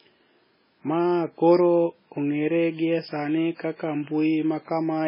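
Speech with heavy MP3 compression throughout: nothing reaches above about 5.3 kHz, leaving the sound dull and watery, with swirling where weak frequency lines drop in and out between frames. The damage is likely from a very low bitrate, around 16 kbps.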